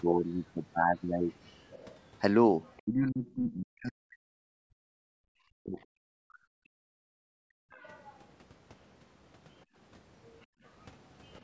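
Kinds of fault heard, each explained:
Other side's voice leaking through: The echo canceller likely failed to strip all of the loudspeaker playback from the microphone, so a faint second voice, roughly 25 to 35 dB below the talker, surfaces in short scraps at 1.46–1.99, 2.65–3.35, 7.7–8.16 and 11.32–11.41 s.
Speech suppressed in double talk: With both sides talking at once, the canceller likely could not tell the talker from the echo and turned everything down. The voice sinks by around 40 dB across about three seconds between 2.83 and 6.46 s, and again briefly at 7.56–7.63 s.
Background gated by the echo canceller: While the loudspeaker was active, the canceller clamped the microphone hard. The room sound drops by about 35 dB for roughly half a second at 6.74–7.28 s and more briefly at 10.46–10.62 s, then returns once the canceller releases.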